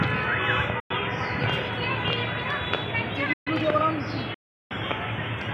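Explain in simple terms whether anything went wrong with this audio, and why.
A couple of things go wrong here, both short gaps of silence. At 0.80 to 0.91 s and again at 4.34 to 4.71 s the sound cuts out, first for about a tenth of a second, then for about a third. That's likely a Bluetooth dropout: packets didn't reach the headphones in time, so they were skipped and the sound picks up further along.

Then at 3.33 to 3.48 s there's a separate pause of about 0.13 s in mid-flow. That one's likely a playback stall, where the player briefly ran out of data or got held up, went quiet, and carried on once it recovered.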